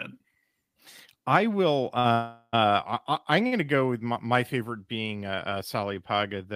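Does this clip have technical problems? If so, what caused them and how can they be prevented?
Yes. The speech has two short stalls from late packets. The first runs from 1.99 to 2.06 s, just after "I will". The second runs from 3.47 to 3.66 s, just before "go with my my". Each time a packet arrived late and the jitter buffer ran dry. The receiver held the last sound for about 50 ms, with a slight buzz or dip. Nothing is lost, but the speech drifts later each time. A deeper adaptive jitter buffer would absorb these delays.

There is also a call audio freeze from 2.12 to 2.55 s, still after "I will". The sound hangs for about 0.4 s. It turns into a fading buzz or hiss, with about 40 ms of near silence at the end. Then the speech resumes where it stopped, and nothing is missing. The likely cause is a burst of packets held up in the network, which left the buffer empty for that whole stretch. 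Steadier network routing, or giving voice traffic priority, would prevent it.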